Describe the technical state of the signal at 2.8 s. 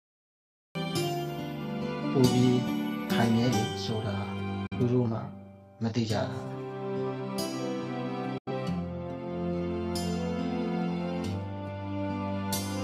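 At 2.8 s the signal is intact, with no audible technical fault at that point.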